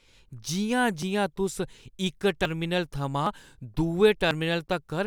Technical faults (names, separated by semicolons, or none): dropped buffer (overrun)